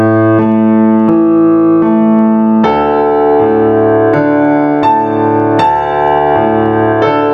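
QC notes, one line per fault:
throughout, gain pumping: the background swells between loud sounds and ducks around 10 dB under each, likely a fast limiter on excessive gain, never silenced like gating.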